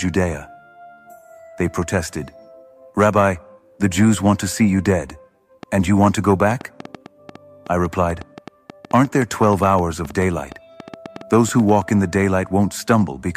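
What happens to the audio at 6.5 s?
A train of clicks runs from 5.63 to 11.9 s: roughly forty irregularly spaced pops at 6.55 per second, as loud as the sound, likely interference pulses.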